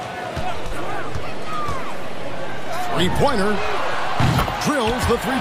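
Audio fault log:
0.41–4.28 s, DC step: the waveform's zero line jumps to a fixed offset at 0.41 s and returns to it at 4.28 s. Each shift is heard as a low thump while the sound carries on. The sudden baseline move, not the signal, makes the transient.
0.67–0.72 s, AAC frame loss with concealment: a gap of about 43 ms, which fits two lost frames, is filled by the decoder from the last good spectrum. The patch sounds briefly smeared and noisy rather than silent, because the estimated content only approximates what was lost.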